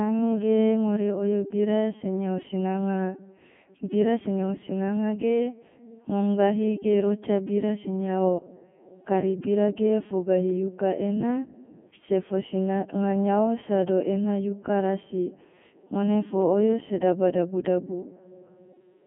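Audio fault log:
throughout: Codec 2 vocoder. The speech is rebuilt from pitch, voicing, energy and a coarse spectral envelope rather than the real waveform, so it sounds robotic and buzzy. The damage is heavy, at the 3.2 kbit/s mode. The band is confined to 150 Hz to 3.4 kHz, with nothing above 3.6 kHz.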